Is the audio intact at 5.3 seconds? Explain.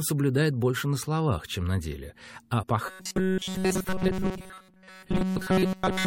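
No. From 2.86 s to the end, the speech is a rigid, metallic buzz at 188 Hz: robotic sound, likely from a buffer of about 5 ms replayed over and over while new audio arrived too seldom. At 5.35 s, a brief glitch cuts in, caused by damaged data in the compressed stream, which threw the decoder out of sync until it found the next frame.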